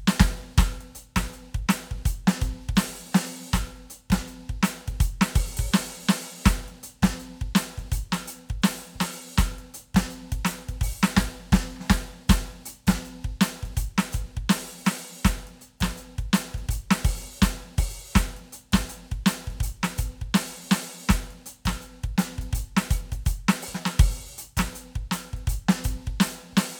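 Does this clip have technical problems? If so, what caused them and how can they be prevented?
No, this music clip has no technical problems, so there is nothing to prevent.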